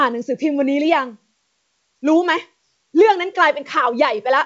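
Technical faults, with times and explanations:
No technical faults are present, so there are no times or explanations to give; the speech carries the wideband telephone coding you'd expect from G.722 at 64 kbit/s, with nothing above about 7.8 kHz.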